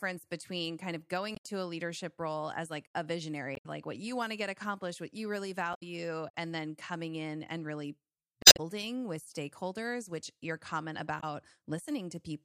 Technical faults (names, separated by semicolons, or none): damaged data in a compressed stream